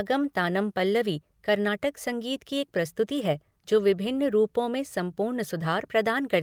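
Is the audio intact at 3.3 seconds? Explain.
No. Repeated timing corrections run from 0.03 to 6.42 s, so 3.3 s falls inside them. The receiver keeps trimming short pieces of the speech to keep pace with a stream arriving about 4% fast. Each trim is small, heard if at all as a slight hiccup or a slightly unsteady tempo.

The cause is clock drift between sender and receiver, present throughout the clip. The sender's clock runs roughly 4 percent faster than the receiver's, so the jitter buffer keeps filling. Those cuts at irregular intervals are the small, recurring timing corrections around 3.3 s.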